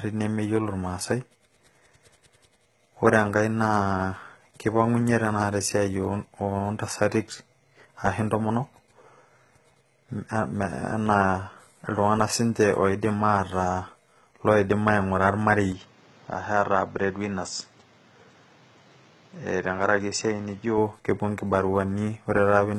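Throughout the speech, the treble stops at 11.8 kHz and the band above the crossover is rebuilt rather than recorded, most likely HE-AAC compression at a bitrate around 16 kbps. The codec damage is heavy: on a spectrogram the upper harmonics look copied and misaligned, so sibilants turn gritty.

From 15.72 to 20.78 s, the input appears switched to a poorer device, likely a second microphone or headset. Content vanishes above 7.7 kHz, the waveform shrinks by about 5 dB, and a new noise floor appears roughly 30 dB down. The change is abrupt, with no gap, and full bandwidth returns at 20.78 s.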